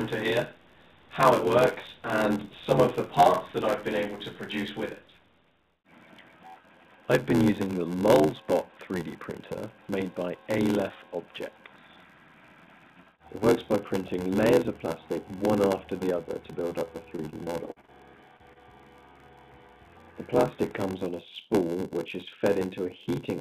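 All the way through there's a steady buzz at about 86.1 Hz, the sign of a block size mismatch (padded). One stage writes shorter blocks than the next reads, which fits a 512-sample buffer, and the leftover is zero-filled. The gaps set the buzz rate and stretch the audio to 0.861 times normal speed, while timbre stays about where it should be.

From 17.16 to 17.90 s you get repeated packet loss with that choppy, robotic quality. Seven holes, the longest 40 ms and about 160 ms in total, were each patched by extending the previous sound. They cover a quarter of that stretch, so fragments drop out.

Right after, there are two short concealed packet losses, at 18.37 to 18.42 s and 18.53 to 18.58 s, each roughly 20 ms of missing audio. The decoder filled each gap by carrying the last sound forward and blending back in, so you hear a quick smear or wobble. All of this comes through a G.711 mu-law call path, which leaves nothing above 4 kHz.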